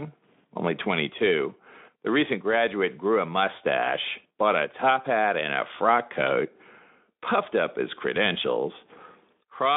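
No technical faults can be heard in this speech clip.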